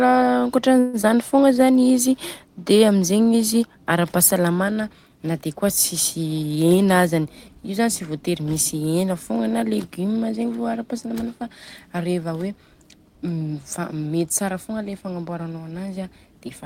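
A call audio freeze runs from 0.79 to 0.96 s. For about 140 ms the speech stops moving forward, and the last sound is drawn out as a fading buzz that never drops to silence. The likely cause is packets held up in transit, leaving the jitter buffer empty while the receiver stretched what it already had. When the stream resumes, it carries on from where it stopped. Nothing is lost, but the audio now runs about 140 ms later.

Almost immediately afterwards comes a skip ahead, from 1.01 to 1.06 s. Playback jumps forward, and roughly 70 ms of speech is gone. The two sides are stitched together with only a brief blend of about 15 ms. The effect is a clipped, abrupt join rather than a pause. A stretch of audio was discarded while later packets were already waiting, which claws back roughly 70 ms of the delay the freeze had added.

A jitter buffer slow-down follows from 1.36 to 1.85 s. The receiver was rebuilding its reserve by repeating individual pitch periods many times in a row, inserting 74 ms in total. 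Over that half-second the speech plays at about 86% of normal speed while keeping its pitch, so sounds come out drawn out and slightly sluggish.

From 6.46 to 7.86 s, leading into "tsy vôtery misy hena", a jitter buffer speed-up does the opposite. The buffer was holding more than its target, so the receiver trimmed short runs of one or a few pitch periods, removing roughly 150 ms. The speech runs at about 111% of normal speed at unchanged pitch and sounds noticeably hurried through that stretch.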